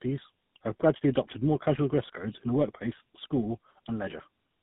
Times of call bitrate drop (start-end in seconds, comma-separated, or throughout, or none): none